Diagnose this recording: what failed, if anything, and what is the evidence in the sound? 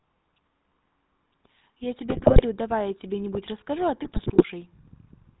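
Codec stage: the GSM full-rate codec gives the whole speech clip a buzzy, gravelly roughness with nothing above 4 kHz. This fits 13 kbit/s pulse-excited coding, a built-in rasp that plain band-limiting lacks.

Network stage: GSM bit errors from 2.1 to 2.42 s and 4.04 to 4.43 s produce squawks, pops and gargling. Corrupted filter, pitch and gain values warp whole frames, rather than silencing them as packet loss would.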